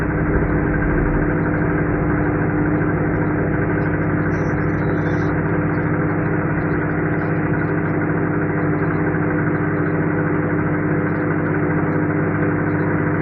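At 8.80 s, damaged data in the compressed stream makes the decoder misread a frame and resynchronise, producing a brief glitch in the sound.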